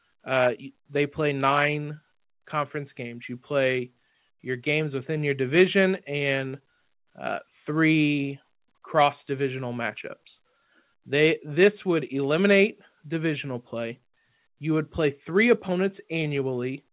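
Nothing stood out on listening to this speech recording, which comes across as a phone-band call with no sound above about 4 kHz.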